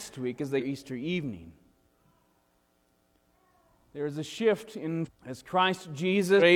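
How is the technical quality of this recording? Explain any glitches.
The recording has three short glitches, all from damaged data in a compressed stream, at 0.56 to 0.63 s, 5.02 to 5.09 s and 6.37 to 6.42 s, each lasting roughly 55 to 70 ms. Corrupted bytes there leave the decoder misreading those frames, losing sync and hunting for the next valid frame header, so each spot comes out as a brief chirp or blip. On a spectrogram each shows as a narrow vertical band of misplaced energy, and on the waveform as a short, abrupt break in shape.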